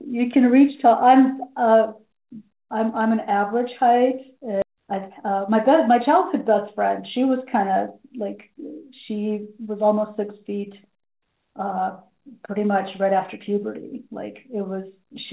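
At 4.62 to 4.64 s there's a skip ahead: roughly a second of speech was dropped, probably lost on the way or discarded when the jitter buffer overflowed, and playback joins the two sides almost directly, so the sentence lurches forward with no gap.

Right after that, from 4.72 to 7.43 s, the jitter buffer speed-up kicks in to work off the built-up delay. It trims tiny pitch-period slices over and over, about 150 ms in total, so the talking runs around 6% fast at unchanged pitch and sounds slightly rushed. All of it sits in a narrowband call path with nothing above 4 kHz, which fits G.711.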